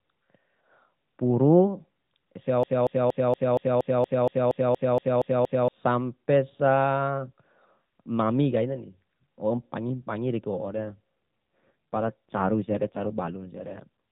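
A speech recording, band-limited to 4 kHz by the AMR narrowband mobile codec, has two faults. The first is a broken-record loop from 2.63 to 5.68 s. A piece about 0.23 s long repeats exactly, back to back, 13 times. The speech that belonged in those three seconds never plays. The likely cause is a stalled player or stream that kept resending the last fragment it held. The second is an AMR rate drop from 10.66 to 13.88 s. The voice turns rougher, buzzier and more synthetic, with no gap and no change in bandwidth. That fits the network ordering the codec down from 12.2 to 5.9 kbps to spend bits on error protection over a weak radio link. The quality returns when the rate climbs back.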